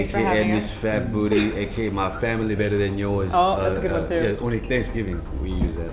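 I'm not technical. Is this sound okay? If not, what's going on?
Yes, this sound is okay, and there's nothing going on that needs fixing.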